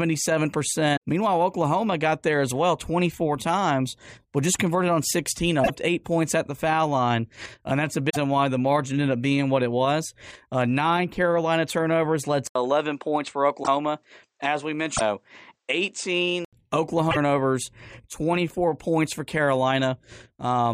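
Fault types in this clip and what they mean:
Broken MP3 bit reservoir, at 0.96, 5.63–5.70, 8.09–8.17, 13.62–13.68, 14.96–15.01 and 17.10–17.17 s: the audio skips ahead with brief chirps, noise bursts or holes, likely because frames went missing and following frames fetched borrowed bits from the wrong data, fitting 26.1 ms frames.
Input switched to a poorer device, 12.47 to 16.53 s: after an 80 ms silence the speech turns duller, with nothing above 9 kHz, a faint new background noise far below the speech, and unchanged loudness, likely from recording moving to a narrower-band microphone or headset.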